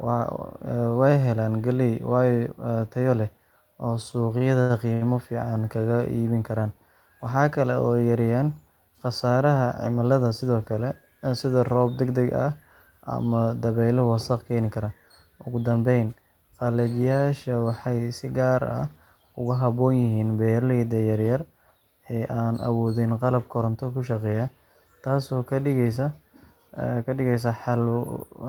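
From 4.11 to 5.03 s the speech has repeated stalls (stutter): five times the jitter buffer ran dry because packets arrived late, and the receiver stretched the last sound to bridge each gap, the longest being 80 ms. About 199 ms was filled this way, roughly a fifth of that stretch, with nothing actually lost. The result is a halting, dragging delivery with brief smeared holds.

Jitter buffer speed-up occurs three times: 10.24 to 10.57 s at 110% speed, 15.37 to 16.23 s just after "wasakh keeni kara" at 112%, and 23.61 to 23.85 s at 111%. In each case the buffer had built up excess delay, and the receiver trimmed short pitch-period-length slices to catch up. It removed a few tens of milliseconds in the first and last, and about a tenth of a second in the middle one. Pitch stays unchanged, but those passages sound rushed.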